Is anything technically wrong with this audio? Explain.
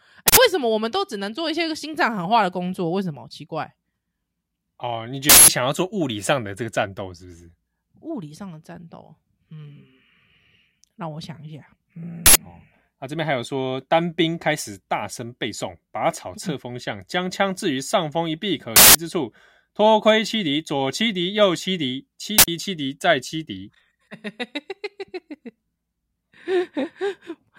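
Yes. An uninitialised buffer fault hits this speech five times: at 0.28, 5.29, 12.26, 18.76 and 22.38 s. Each is a harsh, loud blast of digital noise lasting about 93 or 186 ms. Blocks were played before audio was written, so stale memory came out as samples. The lengths fit 4096- and 8192-sample buffers.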